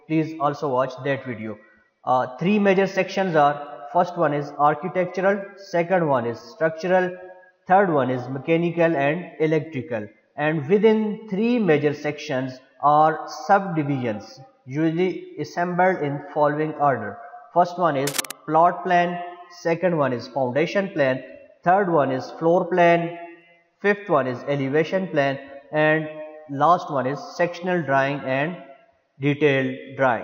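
At 18.07 s, a burst of cable scratch noise cuts in and lasts until 18.33 s. It sounds like dense, ragged scratching, only slightly quieter than the sound itself. The likely cause is a worn cable or connector being moved, so its contact flickered.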